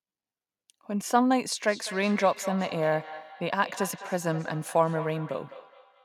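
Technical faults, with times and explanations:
1.62 s to the end: feedback echo between two devices. A second device on the call replays this speech and the microphone picks it up again, so each word returns at a fixed interval of roughly 200 ms, thinner, at most about 14 dB below the speech. Unlike room reverb, the repeats are distinct copies at that steady spacing.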